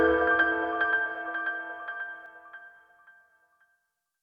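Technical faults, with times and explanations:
0.00–2.26 s, doubled audio track: the sound is heard twice, with a second full-band copy trailing roughly 0.4 s behind and about 5 dB quieter. It is already running when the clip opens and cuts off abruptly at 2.26 s. The likely cause is the same signal arriving again through a slower path. Unlike an echo or room reverb, the copy never decays into repeats and carries no added room colour.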